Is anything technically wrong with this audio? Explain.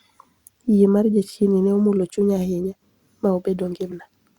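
Yes. Compressed frames are skipped at 3.91 to 3.94 s in this speech. Whole frames never reach the output, so the audio jumps ahead by around 70 ms, which fits a few 20 ms frames going missing.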